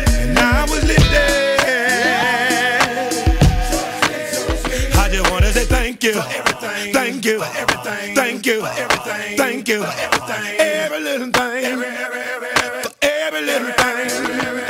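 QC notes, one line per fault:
Nothing to flag here, the audio sounds just as it should all the way along.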